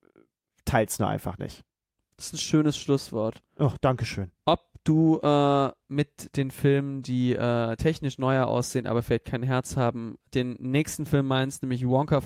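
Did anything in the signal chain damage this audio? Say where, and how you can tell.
No, nothing in the signal chain damaged this speech.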